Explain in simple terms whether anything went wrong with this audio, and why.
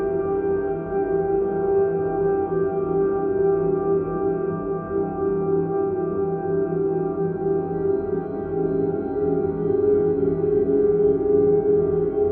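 A wrong sample rate problem: the audio was played back faster than it was recorded, with no conversion, which fits a 32 kHz recording played at 48 kHz. From start to finish everything runs 1.5 times too fast and sounds about seven semitones higher.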